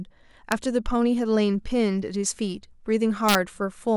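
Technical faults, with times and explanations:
0.52 s and 3.29 to 3.35 s, integer overflow: on these loud peaks the signal was pushed past the top of the integer range, by about 1 dB and then about 2 dB, and it wrapped around to the opposite sign instead of being held at the limit. Every sample over the line jumps across the full range, so you get a harsh crack rather than clipping's duller flattening. The first is a single snap, and the second is a short burst of crackle.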